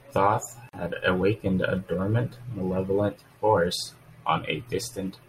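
At 0.69 s the speech drops into a gap of about 42 ms with smeared edges, then resumes where it stopped: a gap at a join of encoded pieces, left by untrimmed encoder delay and padding.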